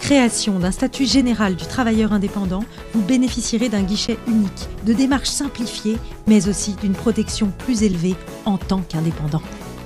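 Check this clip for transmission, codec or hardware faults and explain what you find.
Three brief dropouts of the underrun-with-held-sample type occur at 4.08 s, 6.27 s and 7.93 s. Each time the output buffer ran dry and the converter held its last value, so the waveform goes flat for 11.6 ms, 5.8 ms and 5.0 ms. The first two fit 512- and 256-sample buffers. The sound stops almost silently, and roughly 10 ms, 5 ms and 5 ms of audio were lost.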